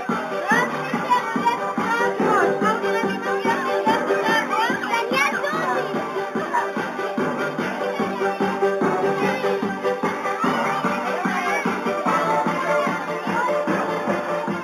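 Throughout, imaging from linear upsampling dulls the top end. Faint mirror images sit around 4 to 8 kHz, roughly 25 dB down, consistent with 8 kHz raised to 48 kHz.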